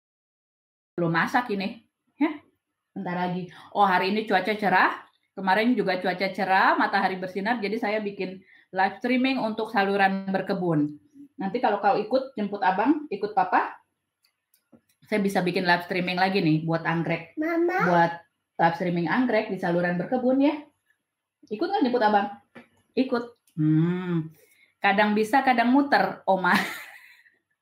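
The audio has a cut-off start: nothing is heard until 0.98 s, and then the sound enters already in progress, with no natural attack or fade-in, because capture or streaming began late and joined a sound midway. On a waveform, the first 0.98 s is a flat line that jumps straight to material already in progress. On a spectrogram, a blank region ends at a sharp vertical edge where energy appears at once across the band.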